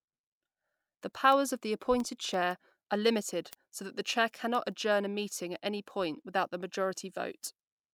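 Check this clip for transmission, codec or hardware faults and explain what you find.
One hardware fault runs through the clip: word clock ticks. From 0.14 s to 7.78 s, ticks recur at a steady rate, roughly every 0.15 s, about fifty in all, over the speech. The receiving device runs on its own clock instead of locking to the sender's. The two clocks differ by around 150 ppm, so they slip past each other at regular intervals. At each slip, a single sample is dropped or repeated, producing a tick.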